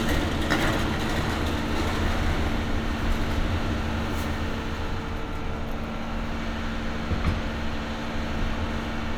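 Nothing stood out as technically wrong on listening to this recording of sounds.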